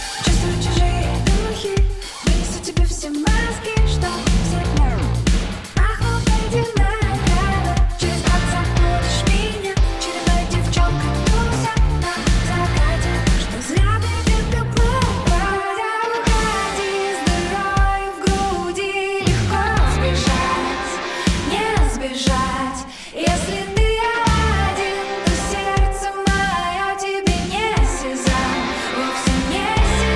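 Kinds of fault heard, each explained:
Nothing here sounds broken; every stretch of the audio holds together as it should.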